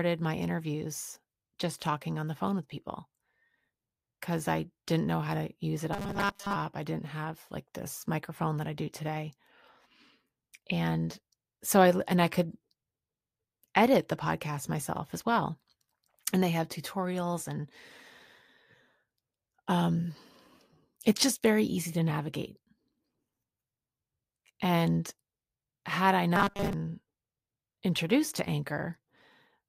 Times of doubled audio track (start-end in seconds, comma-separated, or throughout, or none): none